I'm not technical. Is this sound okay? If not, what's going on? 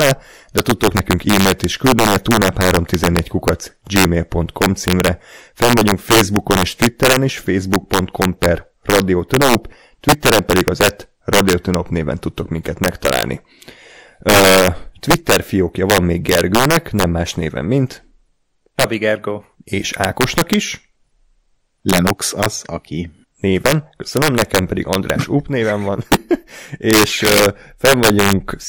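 No. This speech has integer overflow throughout. On the loudest moments, the signal goes past the biggest number the system can store. Instead of stopping there, it flips to the opposite extreme. That causes harsh cracks, much sharper than ordinary distortion, on roughly one percent of the sound.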